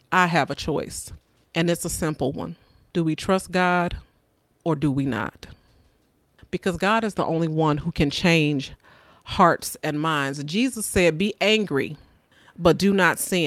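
Nothing in the speech recording stood out as a technical problem on listening.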